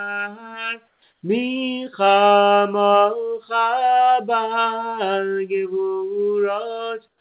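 A sender likely stopped transmitting during quiet moments and the receiver filled the gaps with synthetic noise, so three brief stretches carry comfort noise in place of the background: 0.88 to 1.02 s, about 5 dB quieter; 1.12 to 1.22 s, at the same level; and 7.08 s to the end, about 11 dB quieter. In each, the real background gives way to a flat, featureless hiss. Over the whole sound, nothing is heard above 4 kHz, consistent with narrowband telephone coding.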